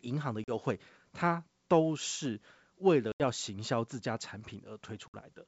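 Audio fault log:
0.44–0.54 s, 3.12–3.21 s, 5.08–5.15 s: packet loss on an ADPCM call. Hard-edged silent gaps replace about 40, 80 and 60 ms of speech. The decoder's predictor and step size lose track of the sender's state, so each return is slightly distorted before settling. The clean wideband G.722 coding around the gaps fits 64 kbit/s.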